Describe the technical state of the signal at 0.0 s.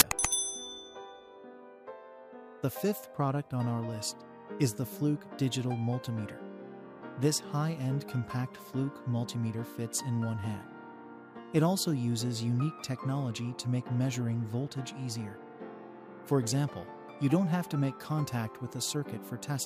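File tags played as audio at 0.0 s: the very start of the file carries a block of metadata, here the compressed data of an embedded cover picture, and the player reads those bytes as if they were samples. Because compressed image data is essentially random, it comes out as a very loud burst of white noise, a hard-edged crack of static lasting about 14 ms before the real audio begins.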